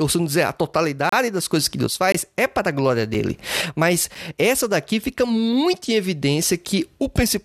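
Four gaps between stream segments cut into the speech, roughly once a second. The first runs from 1.09 to 1.13 s and lasts 31 ms. The second runs from 2.12 to 2.15 s and lasts about 21 ms. Shorter ones follow at 3.14 s and 4.15 s. The spacing fits 1-second segments. Their time stamps don't quite meet, so the player inserts silence. Each gap sounds like a hard-edged dropout. No audio is lost.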